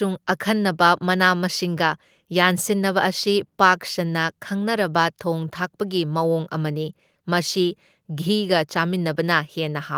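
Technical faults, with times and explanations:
Nothing technical stands out in this speech recording; there's no fault to point to here.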